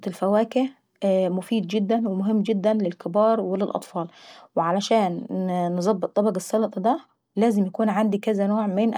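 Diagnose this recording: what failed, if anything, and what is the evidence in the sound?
Nothing failed; no fault is audible in this recording.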